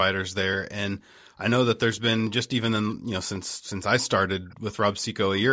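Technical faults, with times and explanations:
1.15–1.34 s, background gated by the echo canceller: the room sound dips by about 40 dB for roughly 150 ms as the canceller clamps the microphone, showing as a brief near-empty gap in the spectrogram's background.
2.27 s, a sharp click, likely from dropped samples: well under a millisecond of audio vanishes, so the waveform jumps abruptly, leaving a thin vertical line across the spectrum.
2.9–2.95 s and 4.46–4.55 s, echo leak: faint scraps of the speech return 419 ms late, about 30 dB and then about 35 dB below it, likely leaking past a loudspeaker's echo canceller. They show as dim, delayed copies of earlier harmonic patterns.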